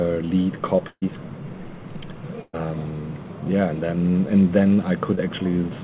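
Over a call link whose band stops at 4 kHz, consistent with G.711 mu-law coding, two runs of consecutive packets were lost or arrived too late, producing a burst of packet loss at 0.88 to 1.04 s and again at 2.42 to 2.55 s. In each case the receiver stretched the last received audio across the hole, about 136 ms and then 116 ms of synthetic continuation fading toward silence, with roughly 40 ms and 10 ms of near-quiet at the tails. What you hear is a held buzz or decaying hiss in place of the real sound, and when the stream picks up again about 140 ms and 120 ms of the original audio have been skipped. Later, a short concealed packet loss at 5.15 to 5.19 s drops about 20 ms of data. The decoder papers over it with roughly 18 ms of extrapolated signal before blending back, leaving a brief smear or wobble where that sliver of audio should be.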